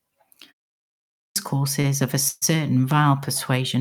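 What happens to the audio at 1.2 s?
At 1.2 s the output device is still waking after a 0.41 s pause: it had gone to sleep in the silence and needs time to start up and lock again. This is a clipped start after a pause, running from 0.85 s to 1.36 s, with about 0.51 s of speech swallowed. When sound finally comes through, the speech begins abruptly out of silence, its opening sounds missing.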